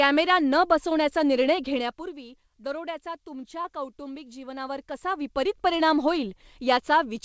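At 3.62 to 3.67 s, short concealed packet loss: 30 ms arrived late, and continuing the previous sound left a brief smear, not a silent dropout.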